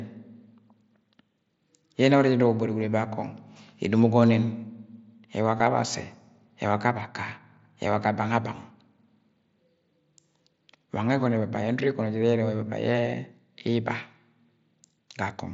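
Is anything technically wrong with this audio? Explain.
Yes. At 5.58 s there is concealed Bluetooth headset packet loss, a short gap of about 15 ms, which fits two lost frames. The receiver filled it by repeating recent waveform, so it sounds like a brief buzzy tone held at full level, with a small warble where real audio returns.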